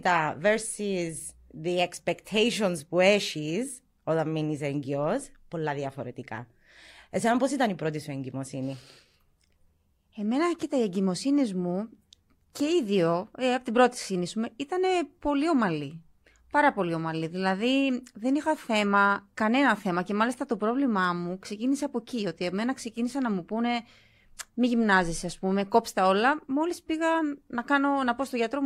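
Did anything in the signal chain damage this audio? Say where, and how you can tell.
No, the signal chain shows no faults.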